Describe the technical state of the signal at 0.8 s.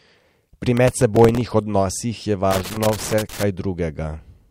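At 0.8 s, processor overload crackle runs from 0.77 to 1.51 s. Missed deadlines repeat stale audio in blocks suggesting roughly 1.5 ms buffers, which sounds gritty and shows as vertical broadband streaks and waveform step discontinuities.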